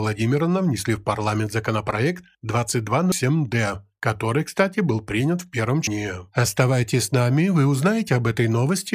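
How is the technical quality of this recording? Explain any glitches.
Two brief glitches from damaged data in a compressed stream, at 3.12 s and at 5.87 s just after "был принят в первом". Corrupted bytes make the decoder misread frames and lose sync, producing a short chirp or blip that appears as a thin broadband vertical streak on a spectrogram.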